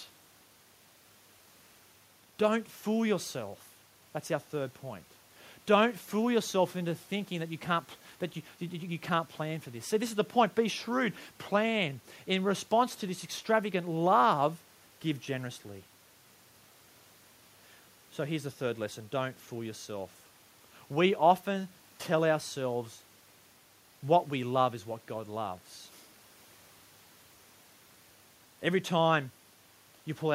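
Speech recording with no faults.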